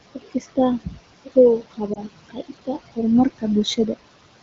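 Throughout the speech, the background sinks between phrases and swells back under them. These are noise suppressor artifacts: the suppressor pulls down the bands it judges to be steady noise, by about 19 dB, frame by frame, while room noise sits about 14 dB below the speech.

From 0.15 to 0.58 s, parts of the speech sound swallowed, dropping by up to about 18 dB. The same happens from 0.84 to 0.98 s (about 14 dB) and from 1.62 to 1.8 s (about 18 dB). This is speech cut by the noise suppressor, which mistook quiet speech for noise and turned it down with the background.

From 1.94 to 2.01 s there is a brief dip or warble, then the voice returns weak or rough for a moment. The brevity points to a single lost AMR speech frame. The AMR-WB decoder at 12.65 kbit/s filled the gap by repeating its last good settings at falling gain.

From 2.29 to 2.69 s the speech fades again, by up to about 19 dB. 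This is another stretch of speech cut by the noise suppressor, affecting roughly a fifth of a second in total.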